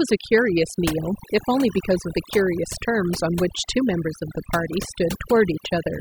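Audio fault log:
Throughout: overdone noise removal. The noise reduction was set too hard on this speech. It pulls individual frequency bands down or shuts them off wherever they sit close to its noise estimate. Quiet speech detail goes with them, and the background drops and breaks up into twinkling specks. On a spectrogram the gaps show as a dark floor scattered with isolated bright dots, and the harmonics look ragged and patchy.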